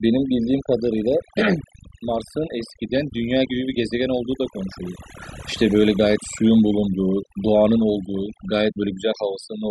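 All the way through, the speech shows overdone noise removal: heavy-handed reduction gates whole frequency bands, so the background twinkles with specks.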